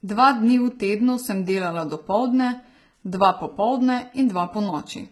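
A speech clip with HE-AAC compression damage throughout: the treble is bright but synthetic, copied up from lower bands, so sibilants turn gritty and lispy and stop dead near 11.8 kHz. Unlike a plain low-pass, the top isn't dull, just wrong. This likely comes from a bitrate around 16 kbps.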